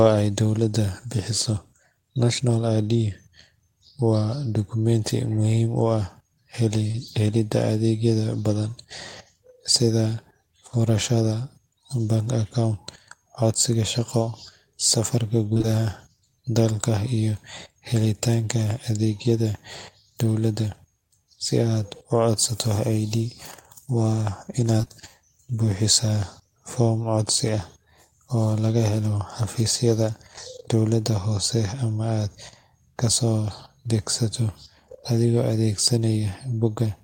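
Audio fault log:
15.54–15.65 s: short concealed packet loss, three back-to-back 20 ms holes patched by continuing the preceding sound, heard as a brief smear or wobble.
24.77–24.92 s: repeated packet loss (robotic sound), four gaps in 0.14 s, about 43% concealed, giving a choppy stretch with pieces missing.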